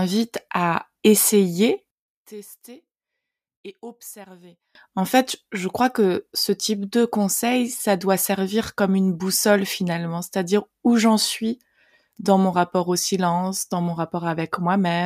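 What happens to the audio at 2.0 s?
At 2.0 s the speech collapses to a faint residue, about 22 dB down, from 1.91 to 4.75 s. One channel inverted is the likely cause: mono summing cancels the shared centre content. The waveform shrinks sharply, and the spectrogram largely empties.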